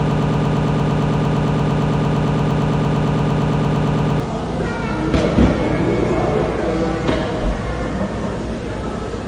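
From the start to 4.2 s, a broken-record loop repeats one 114 ms fragment back to back. A stalled stream is the likely cause. The real audio is lost.

Throughout, nothing sounds above 10.4 kHz. Two kinds of smeared, swirly artefacts overlap. This is likely transcoding between lossy codecs, fitting low-rate AAC-LC followed by HE-AAC.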